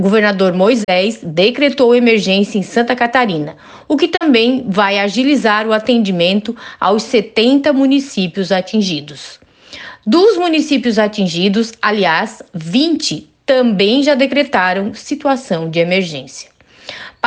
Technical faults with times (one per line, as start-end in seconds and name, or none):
0.83-0.90 digital broadcast dropout
4.15-4.23 digital broadcast dropout